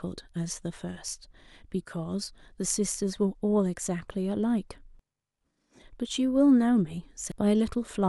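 Damaged data in the compressed stream of this speech recording upsets the decoder's frame sync twice, leaving brief glitches at 4.99 s and 7.32 s.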